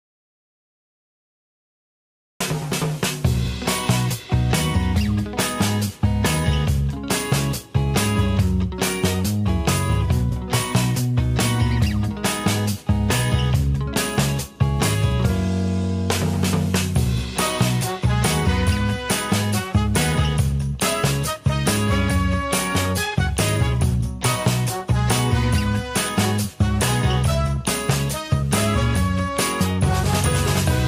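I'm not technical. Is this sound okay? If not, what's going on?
No, not at the very start. From the beginning until about 2.40 seconds the clip is completely silent. There's no faint background hiss, just nothing. The sound then comes in already under way rather than starting cleanly. That is an audio dropout to silence. The likely cause is the input being briefly lost, for example a loose connection or an accidental mute, while the recorder kept writing blank audio. Whatever happened during those first 2.4 seconds is missing.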